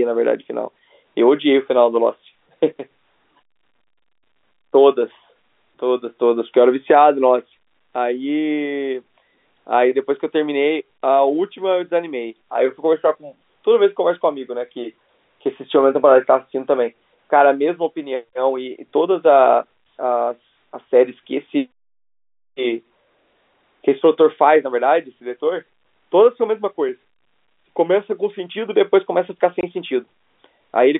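At 29.61 s, packet loss filled with silence leaves a 20 ms hole in the speech, which fits two lost 10 ms packets. Its edges are hard, unlike a concealed gap that fades smoothly.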